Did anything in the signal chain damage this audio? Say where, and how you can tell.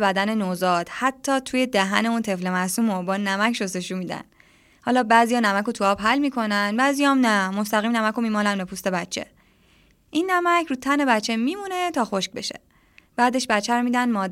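No, nothing in the chain audibly damaged this speech recording at any stage, from capture through conversion and transport to playback.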